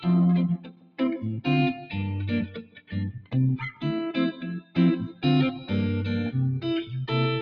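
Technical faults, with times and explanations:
Throughout: noise suppressor applied to music or sounds. A suppressor tuned for speech treats held tones, ambience and reverberant tails as noise and pulls them down, while sharp onsets mostly pass. Its gain swings by roughly 15 dB, so the sound pumps and thins as sustained parts sink between attacks. A waveform shows the envelope collapsing soon after each onset, and a spectrogram shows tails cut off early and patchy, gated background energy.
0.55–1.0 s, 1.74–1.95 s, 2.46–2.94 s, 3.15–3.34 s, 4.6–4.77 s, 5.08–5.24 s, 5.55–5.71 s: sound cut by the noise suppressor. In each stretch the suppressor mistook the sound for noise and clamped it harder than the rest. The deepest drops are about 17, 10, 17, 16, 17, 14 and 8 dB, and the stretches last roughly 0.15 to 0.5 s. On a waveform these are sudden hollows in level. On a spectrogram they appear as faded vertical bands where steady content thins out.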